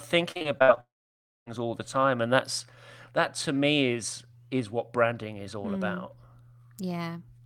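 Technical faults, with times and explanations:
0.31–0.78 s, repeated packet loss (robotic sound): six gaps, the longest 59 ms, each filled by extending the previous sound, leaving this stretch choppy.
0.80–1.48 s, long network dropout: about 0.66 s of audio likely never arrived. The concealing buzz fades quickly to silence before the sound returns at "all the time and".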